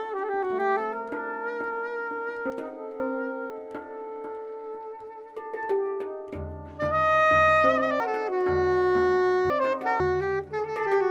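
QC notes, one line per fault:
2.5–3.5 s, chunks out of order: two 500 ms blocks play swapped, the first arriving one chunk late. The result is a jumbled moment with three hard joins.
8.0–10.0 s, chunks out of order: one 500 ms block plays three chunks late, after the sound that should follow it. This gives a longer garbled stretch with three hard joins.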